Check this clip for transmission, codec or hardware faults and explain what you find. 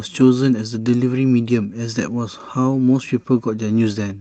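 Nothing stood out on listening to this speech clip.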